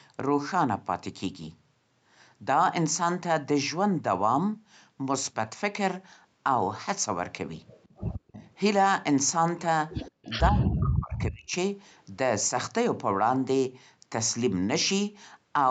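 Speech, with echo and suppression faults from a call path. An echo leak, likely from a loudspeaker-side echo canceller letting residue through, sends back a faint delayed copy of the voice, trailing by about 163 ms and sitting some 20 to 30 dB below the speech, at 7.68–7.97 s, 8.13–8.54 s and 10.06–10.33 s. The echo canceller's gating then clamps the microphone while the far end plays, so the background drops by about 40 dB for roughly a tenth of a second between 10.11 and 10.22 s before recovering. From 10.5 to 11.54 s both sides talk at once and the canceller apparently cannot tell the talker from the echo, so speech is suppressed in double talk: the voice dips, at worst by around 40 dB, across about a second. Throughout, the call processing and Opus codec leave nothing above 8 kHz.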